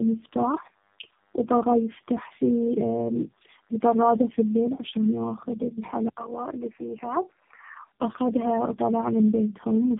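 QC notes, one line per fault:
Throughout: tandem speech coding. Speech sounds rough, muffled and warbly, with nothing above 3.7 kHz. This fits about three low-rate codecs chained, each re-coding the last one's damage.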